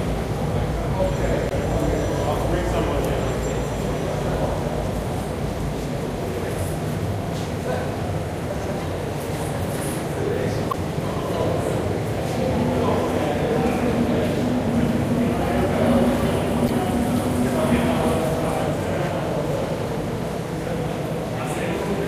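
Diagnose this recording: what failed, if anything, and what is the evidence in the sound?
The failure is in the compressed stream, at the codec or storage stage: there's damaged data in the compressed stream at three spots. You get short glitches of about 40 ms each, at 1.48–1.52 s, 10.70–10.74 s and 16.66–16.70 s, heard as a brief chirp, squawk, click or short hole cutting into the sound. Some of the stored bytes there are wrong, so the decoder misreads those frames, loses sync, and has to hunt for the next valid frame header before it can play cleanly again.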